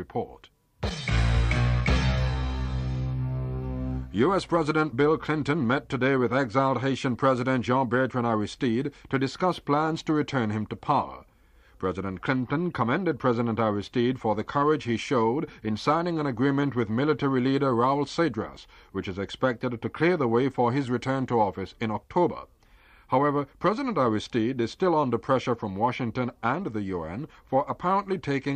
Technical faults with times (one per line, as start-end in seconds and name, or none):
none